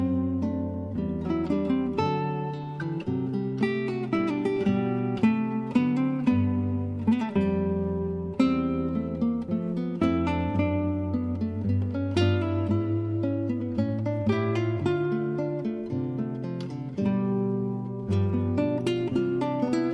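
No technical faults are audible.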